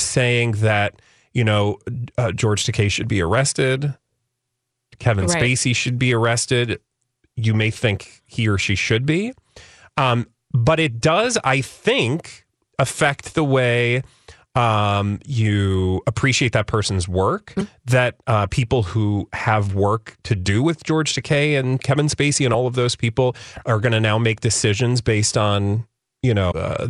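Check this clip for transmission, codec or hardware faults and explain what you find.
The compressed stream carries damaged data in three short spots: 17.57–17.61 s, just after "appreciate that person's work"; 22.51–22.55 s, just before "of those people are"; and 26.48–26.52 s. At each, corrupted bytes make the decoder misread frames and lose sync until it finds the next valid frame header. In the speech, each spot is a roughly 45 ms chirp, squawk, click or short hole that briefly replaces the audio there.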